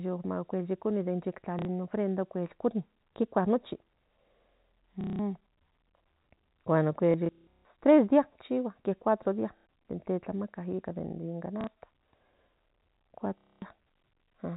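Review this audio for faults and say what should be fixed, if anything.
Packet loss with last packet repeated occurs at 1.59–1.65, 5.01–5.19, 7.11–7.65 (scattered, just before "tres días"), 9.57–9.66, 11.61–11.67 and 13.38–13.62 s. Lost audio is filled by replaying the previous packet. Longer runs buzz near 33 Hz, which fits 30 ms packets. The telephone-band G.711 coding, topping out at 4 kHz, is not at fault. Prevent this with a better network path or jitter buffer, plus proper packet loss concealment.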